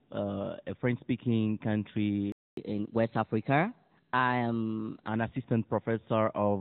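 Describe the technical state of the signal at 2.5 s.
The player likely ran out of buffered data or had its thread blocked, so output stopped from 2.32 to 2.57 s. This playback stall is heard as 250 ms of silence cutting the speech off mid-flow.

On resuming at 2.57 s, the player works through its backlog by resampling 1.1 times faster. This catch-up at higher speed raises pitch by about one and a half semitones and quickens delivery until 5.08 s.

The speech throughout, including around this moment, passes through the AMR narrowband mobile codec at 10.2 kbps. Its 8 kHz sampling discards everything above 4 kHz, and its vocal tract model and sparse pulse excitation leave plainly audible codec damage: a muffled, buzzy, synthetic quality.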